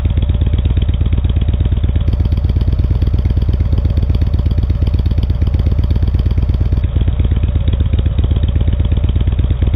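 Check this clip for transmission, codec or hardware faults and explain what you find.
One fault is audible, in the middle of the clip. Imaging from linear upsampling runs from 2.07 to 6.82 s. The sound fits an 8 kHz source raised to 44.1 kHz by joining samples with straight lines, a weak filter that dulls the top and leaves a faint mirror image of the band between 4 and 8 kHz, some 40 dB down. It comes across as a light metallic shimmer on bright detail.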